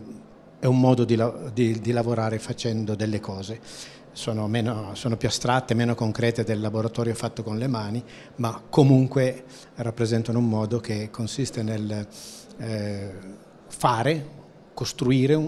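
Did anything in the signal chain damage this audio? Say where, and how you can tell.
No, nothing in the signal chain stood out as having damaged this audio when I listened to it.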